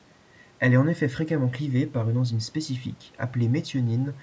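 No technical faults can be heard in the speech, and the faint room noise about 35 dB below it is part of the recording.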